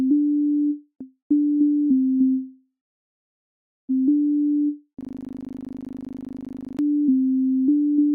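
From 2.31 to 3.91 s, a call audio freeze: packets were likely delayed and the jitter buffer starved, so the last sound trails off into about 1.1 s of silence before resuming where it stopped. From 5.01 to 6.79 s, a system hang loop: the system stalled while the hardware replayed one 40 ms buffer 44 times, producing a rapid stutter at 25 Hz.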